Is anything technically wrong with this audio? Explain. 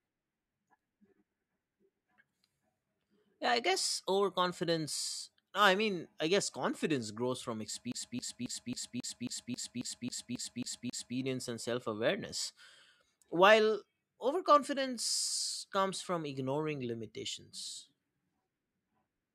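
Yes. From 7.92 to 11.17 s the speech is caught in a CD stuck on one turn: the laser is thrown back a track each revolution, so the same 0.27 s fragment replays 12 times, each pass cut by a brief mute, giving a rapid, even stutter.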